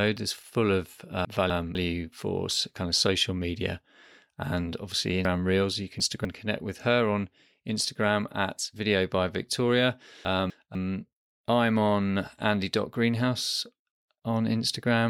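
Chunks out of order at 1.25–1.75 s, 5.25–6.25 s and 10.25–10.75 s: a 250 ms chunk plays late, after its successors, giving jumbled speech. Unlike a dropout, nothing is missing.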